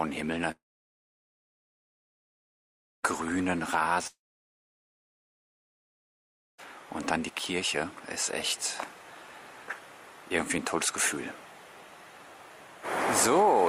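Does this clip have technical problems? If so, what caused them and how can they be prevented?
Yes. Long network dropouts at 0.51–3.06 s and 4.07–6.61 s: sound decays into a fading buzz or hiss, then about 2.4 s of silence, and resumes with 2.5 s skipped, likely from lost packets. Unlike a brief concealment glitch, the gap isn't patched over. A more stable connection with redundancy prevents it.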